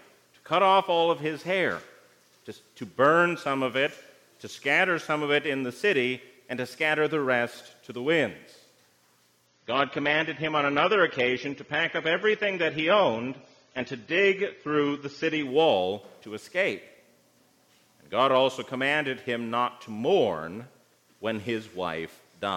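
From 9.47 to 15.47 s the audio abruptly goes dull and smeared, with nothing above 7 kHz and more codec artefacts, then snaps back with no gap. This is an adaptive stream at a lower bitrate, consistent with a temporary switch from roughly 96 to 24 kbit/s AAC.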